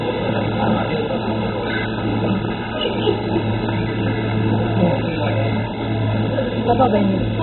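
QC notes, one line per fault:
Throughout: MP2 compression, likely the cause here. Nothing comes through above about 4.1 kHz, so the whole clip sounds dull and boxed-in, and what's left has a heavy gurgling, grainy texture. That fits MPEG Layer II squeezed to a very low rate, somewhere around 16 kbps: there aren't enough bits to go round the sub-bands, so the upper ones get shut off entirely and the remaining ones are quantised so coarsely they churn.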